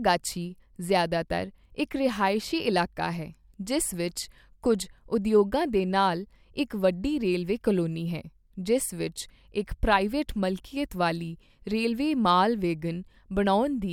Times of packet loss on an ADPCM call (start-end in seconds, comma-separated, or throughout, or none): none